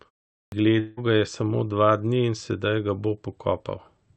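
It's a speech clip, and the first thing you'll catch is a clipped start after a pause at 0.48 s: after about half a second of silence the output device needed time to wake, so roughly 40 ms of the onset is swallowed and the sound comes in abruptly. Then from 0.79 to 1.00 s there's what's likely a long network dropout, with about 0.18 s of audio never arriving. The receiver papers over it with a fading buzzy continuation of the last sound instead of silence, and playback picks up again past the missing chunk. It's all sitting on a call path that tops out around 8 kHz, which fits Opus.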